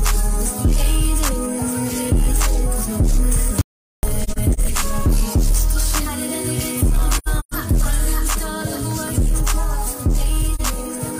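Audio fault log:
3.61–4.03 s, audio dropout to silence: the input was likely lost while recording continued, leaving about 0.42 s of silence with no room tone.
4.23–4.59 s, 7.18–7.54 s, 10.55–10.61 s, AAC frame loss with muting: lost frames were decoded as zeroed spectra, so the sound fades out and back in around brief dips and soft-edged holes. The longest hole, near 7.2–7.5 s, is roughly 150 ms.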